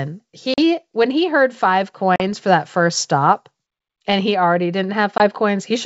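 Packet loss on an ADPCM call cuts silent 40 ms holes at 0.54 s and 2.16 s, and a 20 ms hole at 5.18 s. The decoder's predictor falls out of step, so speech returns slightly distorted before settling.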